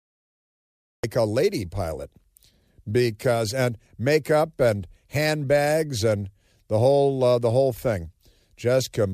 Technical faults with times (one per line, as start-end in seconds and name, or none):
0.00-1.04 cut-off start